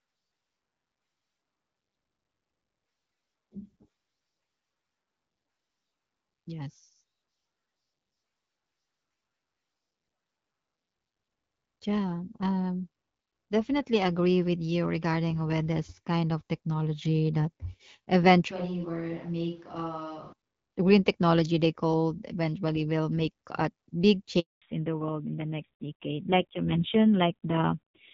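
It's a speech recording. From 18.51 to 20.33 s the sound suddenly turns roomy and hollow, about 10 dB quieter with more background noise, most likely a switch to a distant microphone. At 24.40 s there's a handover gap: the audio dies for 220 ms, until 24.62 s, and whatever was said there is gone. Right after, at 24.62 s and through to the end, you get a fallback to narrowband. Everything above 4 kHz disappears and the sound goes dull and rough, which points to a low-rate narrowband codec replacing the lightly coded HD Voice heard earlier.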